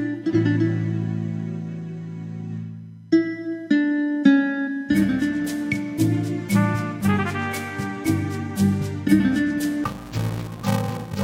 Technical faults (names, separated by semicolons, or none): interleaved audio read as planar